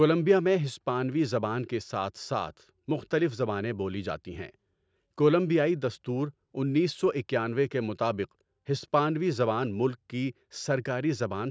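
No technical faults are present.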